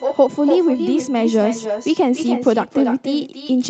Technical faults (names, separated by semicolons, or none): echo with no canceller; USB whine